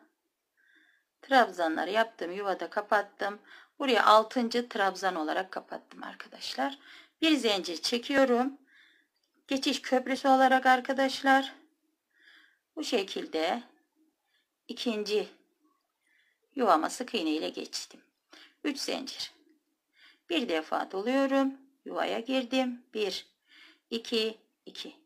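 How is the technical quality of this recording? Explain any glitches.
Four tiny skips interrupt the sound at 8.18 s, 10.17 s, 14.13 s and 24.08 s. This is overlap between stream segments. Timestamps on adjacent 2 s segments collide, so the player discards roughly 20 to 40 ms of genuine audio and the waveform jumps abruptly.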